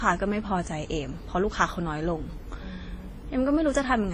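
Throughout the speech, the combined artefacts of two lossy codecs are audible, likely transcoding from WMA at 32 kbit/s to Vorbis at 34 kbit/s, with nothing above 15.2 kHz.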